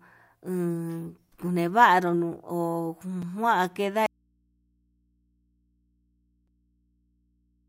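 At 3.22 s the program failed to deliver one output buffer in time, so about 5.3 ms of samples became a block of digital silence. The length fits a 256-sample buffer. The signal drops straight to zero and returns with no fade, and the hole is too short to hear as a gap. It comes across as a single sharp tick in the speech.

From 4.06 s to the end there is an audio dropout to a faint residue. The wanted signal is gone, most likely because the source feed broke while the path after it stayed live. The speech cuts off abruptly, and what remains is only mains hum from the open input, far below the earlier speech level. It does not fade the way a pause would.

The same buffer underrun recurs at 6.48 s, again as a 5.3 ms block of digital silence. Here it interrupts the hum, leaving a brief click in the low drone.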